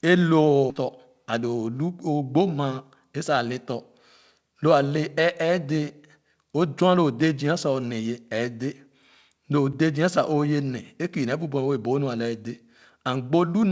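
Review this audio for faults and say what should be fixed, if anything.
Skip ahead at 0.70 to 0.72 s: about a second of audio was discarded while later packets were already queued, so playback jumps forward and the two sides of the cut are spliced almost directly with no gap. Preventing it means sizing the jitter buffer to absorb delay bursts rather than dropping audio on overflow.

Jitter buffer speed-up from 0.82 to 2.97 s: the buffer was holding more audio than its target, so the receiver repeatedly removed short pitch-period pieces, running the speech at 109% speed with unchanged pitch and taking out about a fifth of a second. It sounds hurried. Spreading the catch-up more gently, or keeping the buffer closer to its target, would avoid it.

Block of digital silence at 9.73 s: about 5 ms of samples dropped straight to zero and back with no fade, which is heard as a brief tick at the edges, consistent with the output buffer not being filled in time. 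Giving the audio callback enough priority and headroom to always deliver its buffer would prevent this.

The G.722 call path itself, limited to nothing above 8 kHz at 64 kbps, is working as designed.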